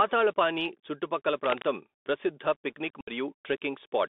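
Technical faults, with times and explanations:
throughout: Bluetooth CVSD headset codec. Narrowband 250 Hz to 3.6 kHz band, granular hiss, scratchy sibilants; the spectrogram shows nothing above 3.6 kHz, which fits a 64 kbit/s CVSD link.
1.44–1.68 s: cable scratch noise. Dense, irregular broadband bursts about as loud as the speech, likely a worn cable or connector being moved; spiky vertical smears on the spectrogram.
3.01–3.10 s: unconcealed Bluetooth headset packet loss. About 64 ms of audio drops out, roughly fifteen lost packets, leaving short holes with abrupt edges in the waveform.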